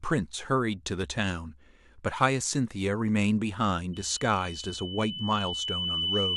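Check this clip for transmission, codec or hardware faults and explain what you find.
Loudspeaker feedback squeal runs from 3.93 s to the end: a 3 kHz loop tone swells over about two seconds until it matches the speech in level.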